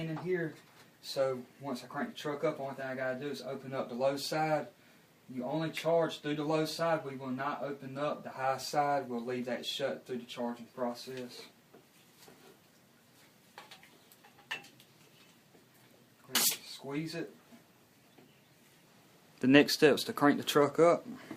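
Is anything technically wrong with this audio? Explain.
No, nothing technically wrong turns up anywhere in this audio, so there's nothing here to flag or explain.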